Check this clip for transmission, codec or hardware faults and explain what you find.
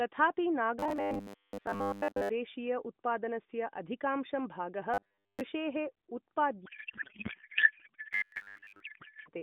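Two faults appear in this speech clip, carried over an AMR narrowband line whose band runs from about 150 Hz to 3.6 kHz.

From 0.79 to 2.29 s, 4.94 to 5.42 s and 8.13 to 8.80 s, the voice turns into a rigid, metallic buzz pinned at 100 Hz. This is robotic sound from repeated short buffers, likely caused by audio arriving too seldom so the software loops a chunk of about 10 ms while most of the real signal is skipped.

From 6.66 to 9.29 s, speech dissolves into garbled noise and warble that barely tracks it. This is a codec payload misread: octet-aligned AMR frames are being parsed as bandwidth-efficient, so every field lands in the wrong place.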